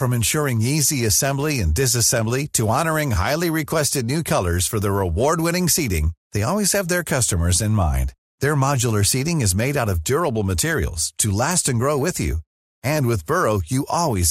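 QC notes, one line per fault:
Throughout, MP2 compression: the speech sounds dull and carries a gurgling, granular roughness that stays audible the whole way through, likely from MPEG Layer II coding at a low rate, with a degree of damage that fits about 80 kbps. Upper sub-bands drop in and out, so the top end flickers rather than being cut cleanly as a plain low-pass would leave it, and the coarse quantising gives a grainy texture instead of MP3-style swirly pre-echo.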